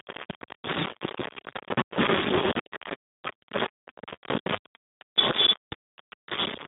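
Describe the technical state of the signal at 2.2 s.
At 2.2 s the speech carries heavy grainy distortion that rises and falls with the signal, with the error roughly as loud as the speech itself. The likely cause is low bit depth without dither, around 3 bits with rounding. Unlike steady hiss or dithered noise, the grit tracks the signal, and quiet stretches collapse or sputter between steps.

The Speex codec is also at work there, at a low bitrate that suggests about 4 kbps, with heavy damage. The speech sounds noisy and hoarse because the excitation is starved of bits. The band is limited to about 150 Hz to 3.6 kHz, with nothing above 3.8 kHz. That coded roughness within a telephone band separates it from a simple low-pass filter.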